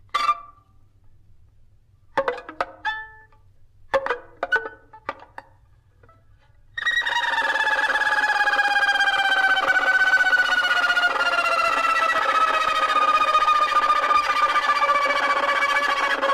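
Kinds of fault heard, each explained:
Periodic USB or driver dropouts: Something stalls the audio path at a fixed interval, and a tiny slice of signal is lost. Here it is replaced by silence, about a millisecond each time. Around ten regular ticks occur every 0.5 s, from 8.68 to 13.19 s.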